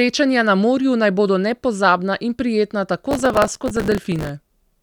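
A speech clip in which the processor falls behind and repeatedly misses its deadlines for small buffers of roughly 3 ms each. This processor overload crackle runs from 3.11 to 4.29 s, with each missed slot refilled by stale audio, producing a gritty, tearing crackle over the speech until the load eases.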